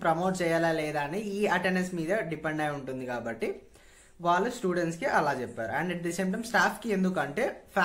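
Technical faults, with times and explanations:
No technical faults can be heard anywhere in the audio, and the signal holds steady and continuous throughout.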